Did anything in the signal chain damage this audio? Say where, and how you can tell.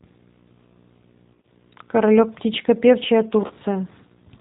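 Yes. A steady buzz runs through the whole clip at about 35 dB below the speech, with hash above it and a faint whine at 15.7 kHz. That points to video or display buzz from analogue wiring: a screen or video cable is coupling its 59.94 Hz field rate and its line-rate tone into the audio path.

The speech sounds slightly rough and synthetic throughout, and nothing passes above 4 kHz. This is G.729 codec damage at the codec stage, and it is plainly audible. The band limit and texture fit 8 kbit/s G.729A, which rebuilds each 10 ms frame from a vocal-tract filter, a pitch predictor and a few pulses.

From 1.34 to 1.51 s, and again from 3.47 to 3.53 s, the speech smears into a buzzy tone or coloured noise that fades, and stays weak briefly afterwards. This is VoIP packet loss concealed by the speech codec, at the network stage. The first gap is scattered over about 100 ms, with about 50 ms lost in runs no longer than 20 ms, which fits roughly five dropped frames. 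The second gap fits about 30 ms lost. In both, the decoder stretched its last pitch and filter with falling gain.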